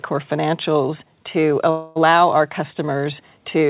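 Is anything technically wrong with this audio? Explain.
Yes. From 1.70 to 1.98 s there is a call audio freeze. The sound stops progressing and the last moment is stretched into a fading buzz lasting roughly a quarter of a second. The cause is likely late packets draining the jitter buffer, with the receiver synthesising a continuation until data resumed. Nothing is lost; the audio picks up where it halted, now about 256 ms later. The band ends at 4 kHz, consistent with G.711 mu-law telephony coding.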